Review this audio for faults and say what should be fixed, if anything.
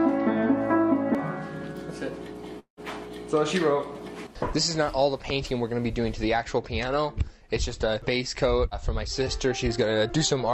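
From 2.59 s to 2.80 s the audio breaks up. The last sound before the gap is stretched into a buzz that fades over about 176 ms, ending in roughly 100 ms of near silence. When the signal resumes, about 180 ms of material is missing rather than delayed. This is likely a long network dropout: packets stopped arriving, and the receiver concealed the gap by continuing the last sound until it had nothing left to extend.

To prevent it, stabilise the network path and add packet redundancy or forward error correction with enough jitter buffering to ride out short outages.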